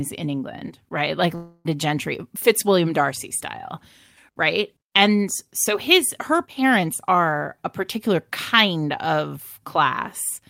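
Long network dropout, 1.35 to 1.67 s: speech halts and a fading buzz fills the gap, likely from lost packets, and 0.3 s never returns.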